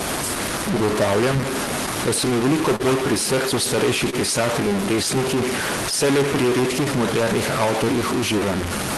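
Distortion rides on the speech from start to finish, and the pauses fill with noise instead of falling silent. This points to a stuck bit, likely a single data line held at a fixed value, which shifts about half the samples by that bit's weight and flips noise around the zero line whenever the signal is small.

Alongside it, small timing hiccups recur unevenly through the whole clip. This is clock drift between sender and receiver: the sender's clock runs roughly 2 percent slow, so the receiver's jitter buffer keeps draining and has to be topped up.

From 1.41 to 2.82 s, scattered short gaps show up as about three brief smears or ticks, the longest around 40 ms. Each marks a packet that arrived too late, patched by continuing the preceding sound, so nothing is actually lost.

From 2.28 to 8.41 s, repeated timing corrections stretch the audio to about 99 percent speed, adding roughly 50 ms in total. 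This comes across as a faintly unsteady tempo, with small repeated slivers that keep the receiver in step with the slow sender.

At 4.10 to 4.15 s, a short stall from a late packet holds one sound for about 30 ms. The buffer ran empty and the receiver extended the last audio until the packet arrived.

From 5.90 to 7.27 s, a second cluster of scattered short gaps brings about three tiny hiccups, the longest roughly 10 ms. They sit on an Opus call path whose top end stops near 12 kHz, which fits a rate of about 24 kbps.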